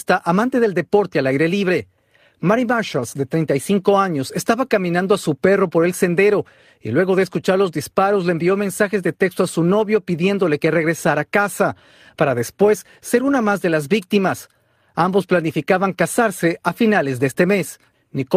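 No technical faults detected.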